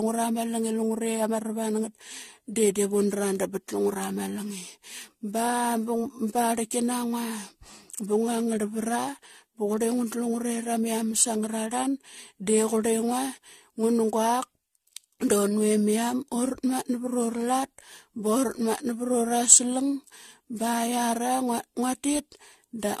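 Generation loss runs through the whole speech clip: nothing reaches above 14 kHz, and the sound is swirly, smeared and hollow, with consonant attacks blurred. The likely cause is repeated lossy coding, with the audio decoded and re-encoded around seven times, which fits an AAC-LC chain at about 64 kbit/s. Each pass requantised on a shifted frame grid, so noise and spectral holes built up beyond what one encode would leave.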